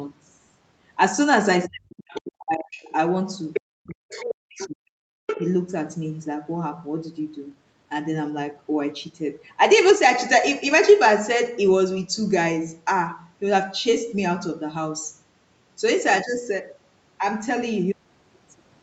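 From 1.67 to 2.91 s, speech is suppressed in double talk. The voice dips as much as about 40 dB, likely because the echo canceller turned down both talkers. Faint scraps of the other side's voice leak through at 2.09–2.21 s and 2.78–2.84 s, likely echo the canceller missed. A louder leak follows at 3.53–3.61 s, nearly speech level. From 3.63 to 5.02 s the voice is turned down again by double-talk suppression. Further leaks come at 4.10–4.35 s, 4.55–4.69 s and 5.27–5.52 s, the last almost as loud as the talker.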